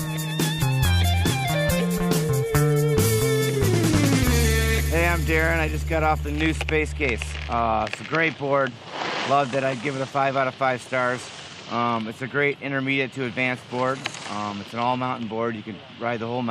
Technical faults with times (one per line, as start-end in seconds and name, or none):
none